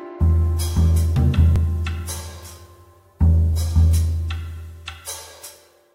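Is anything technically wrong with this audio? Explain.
Yes. At 1.56 s there is an overlap between stream segments. Two 2.0 s segments claim the same few milliseconds, and trimming that overlap deletes real audio, so a tiny skip sounds. The waveform shows an abrupt step, and the spectrogram shows a thin vertical broadband line.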